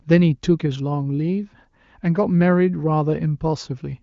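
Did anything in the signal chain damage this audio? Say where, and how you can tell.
No, none of the stages along the chain left audible damage on this speech. What can be heard is the AMR wideband (HD Voice) path: the audio stops around 7.5 kHz and any coding effects are faint at most, which fits the codec running at a high rate of about 23 kbit/s.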